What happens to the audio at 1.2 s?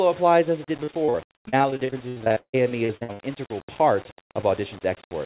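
Repeated packet loss (robotic sound) runs from 0.84 to 3.21 s, which includes 1.2 s. Lost packets are patched by extending the previous sound, leaving choppy audio with pieces missing and gaps of up to 154 ms. Throughout, a gritty, signal-following graininess roughly 20 dB below the audio is heard, likely low bit depth without dither, consistent with rounding to about 6 bits.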